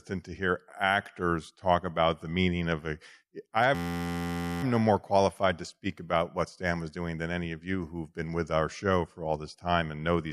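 After "meaning of a I", at 3.75 s, a system hang loop begins. The computer froze. The hardware replayed one 11.61 ms stretch, fitting a 512-sample buffer. It sounds like a steady 86.1 Hz buzz. Speech resumes at 4.63 s with "no more qualified to".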